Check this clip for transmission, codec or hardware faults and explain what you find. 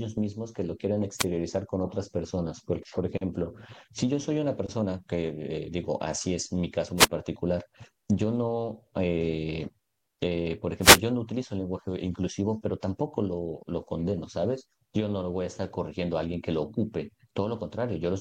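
There's one fault type here, repeated three times: wireless microphone noise hits at 1.18–1.25 s, 6.97–7.07 s and 10.81–10.99 s. The analogue FM radio link fades as reflections cancel, so receiver noise surges up, heard as short swishes of static.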